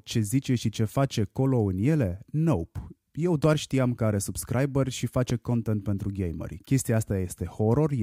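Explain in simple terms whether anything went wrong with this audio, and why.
Two loud pops interrupt this speech clip, one from 3.44 to 3.47 s and another from 5.30 to 5.33 s. Each is a single sharp hit that jumps well above the speech, which carries on underneath. The likely cause is a sudden jolt of voltage, from a plug, a switch, static or a driver hiccup, getting added to the signal, with the gear after it shaping that jolt into a pop.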